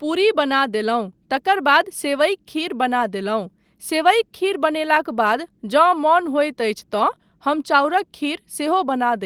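Nothing stood out as a technical problem on listening to this speech recording.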